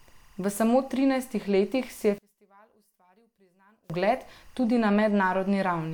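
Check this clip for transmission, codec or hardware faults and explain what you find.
Two faults are audible.

Timecode bleed runs through the whole clip. Linear timecode has leaked in from a nearby track or cable. Its square wave flips between tones near 1 and 2 kHz at 23.976 frames per second. It sits roughly 40 dB under the speech as a faint chirping warble.

From 2.18 to 3.90 s, the level in mono drops by about 36 dB. The speech nearly disappears, leaving only a faint residue. The likely cause is one channel inverted. The shared centre content then cancels when the channels are summed.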